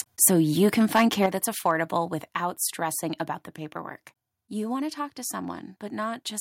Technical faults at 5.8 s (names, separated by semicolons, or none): none